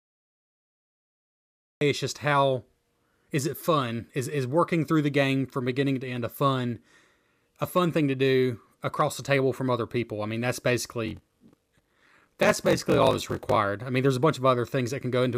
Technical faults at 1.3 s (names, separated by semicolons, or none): cut-off start